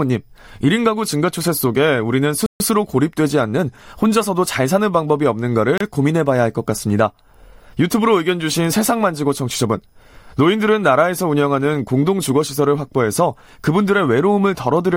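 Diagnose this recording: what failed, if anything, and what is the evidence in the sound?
Block of digital silence at 2.46–2.60 s (140 ms) and 5.78–5.81 s (29 ms): a likely buffer underrun zeroed the speech, with abrupt edges at each cut.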